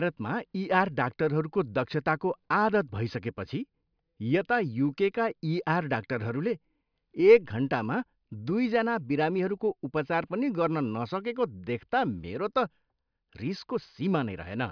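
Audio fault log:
No audible faults detected.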